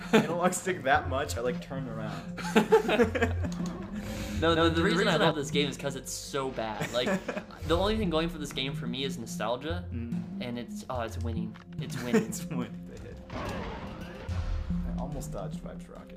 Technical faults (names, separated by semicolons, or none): doubled audio track